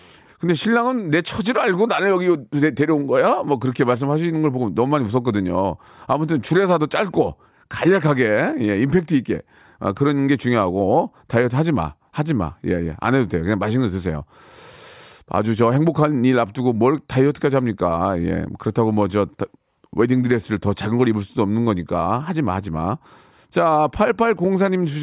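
No technical faults can be heard anywhere in this speech recording. Nothing in it calls for a timestamp or a fix.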